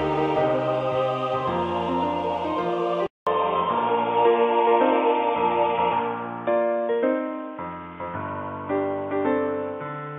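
At 3.07 s, after a 200 ms silence, the sound turns dull and boxy to the end, nothing above 3.6 kHz, level shifted and a new noise floor: likely an input switched to a poorer device.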